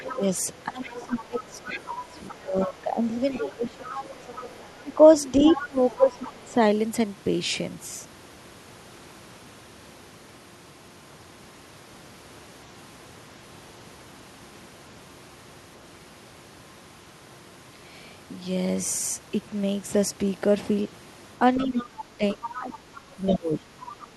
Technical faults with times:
0.00-0.25 other side's voice leaking through
0.11-4.29 speech suppressed in double talk
0.82-2.76 other side's voice leaking through
3.31-4.83 other side's voice leaking through
4.82-6.58 speech suppressed in double talk
5.44-6.41 other side's voice leaking through
21.55-24.06 other side's voice leaking through
21.63-24.08 speech suppressed in double talk

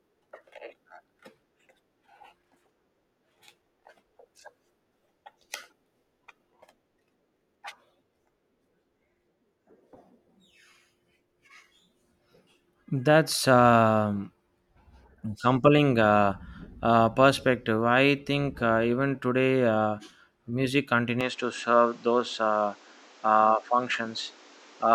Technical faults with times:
21.21-24.94 input switched to a poorer device

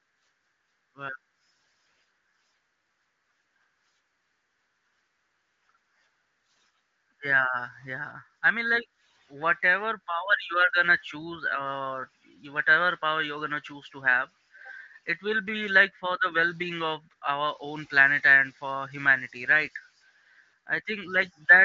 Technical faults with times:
none

